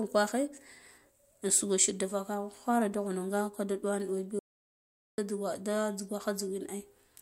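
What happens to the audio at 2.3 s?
Nothing goes wrong at 2.3 s; the speech runs on without any dropout, click or distortion.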